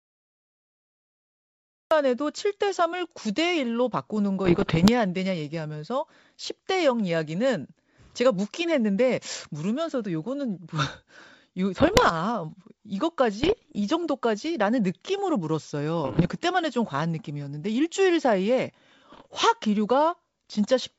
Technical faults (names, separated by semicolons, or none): cut-off start; bit errors on an ADPCM link